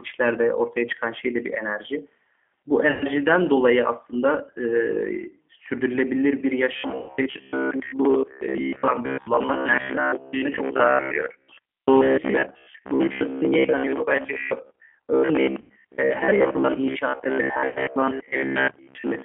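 Throughout, the speech carries G.729 codec damage: a line band of roughly 250 Hz to 3.4 kHz and the slightly rough, synthetic texture of an 8 kbit/s model that rebuilds each frame from a filter, a pitch predictor and a few pulses. Unlike plain band-limiting, the grain sits inside the speech itself.

At 2.91 s, VoIP packet loss concealed by the speech codec appears. About 100 ms goes missing, and the decoder stretches its last pitch and filter into a fading buzzy tone or coloured noise. The following syllables stay weak while the decoder rebuilds. That smeared, decaying sound, rather than silence or a click, marks concealment. The same happens at 6.98 s (about 110 ms), 15.61 s (about 90 ms) and 17.68 s (about 80 ms).

From 6.76 s to the end, robotic sound from repeated short buffers sets in. Most of the audio is replaced by loops of its own last few milliseconds, giving a rigid, metallic buzz near 66.7 Hz that still roughly tracks the speech. 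The cause is likely audio arriving too seldom, with a repeat period that fits a 15 ms buffer. Unlike the concealment, it keeps a fixed pitch and does not fade.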